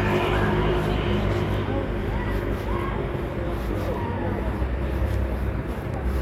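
From 0.34 to 5.94 s, word clock ticks recur about every 0.4 s: an unlocked digital link, some 50 ppm off, slips a sample each time. The steady spacing sets them apart from random clicks.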